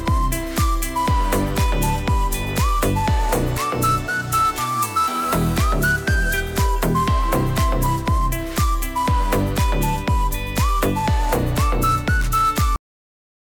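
At 12.76 s the audio shows a cut-off end: the final buffers were never written, so the sound stops abruptly mid-event and drops to digital silence without any decay.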